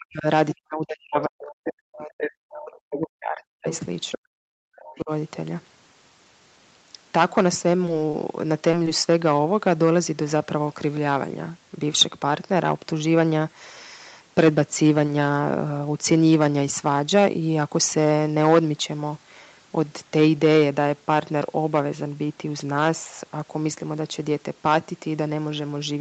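From 0 to 0.26 s, 0.55 to 3.67 s and 4.17 to 5.11 s the speech sinks by up to about 40 dB, roughly 4 s in all. This is speech suppressed in double talk, most likely an echo canceller that could not separate the local talker from loudspeaker echo and turned both down. Unlike a leak, the near voice itself dips out.

Around that stretch, the other side's voice leaking through appears in brief scraps: 3.74 to 3.79 s at about 20 dB below the speech, 4.11 to 4.18 s at about 10 dB below, and 4.96 to 5.00 s at about 35 dB below. These are likely echo residue the canceller failed to remove. Here a second voice is added rather than the talker being lost.

At 7.85 to 7.89 s and 8.11 to 8.15 s there is a short stall from a late packet. Each time, the jitter buffer ran dry and the last sound was stretched by 20 ms before playback resumed from the same point. The sound is held, not lost.

At 8.71 and 15.06 s there is a short concealed packet loss. 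In each case 20 ms never arrived and was filled by continuing the previous sound, heard as a brief smear. Unlike a stall, that audio is actually gone. All of this sits within the call path's 8 kHz bandwidth.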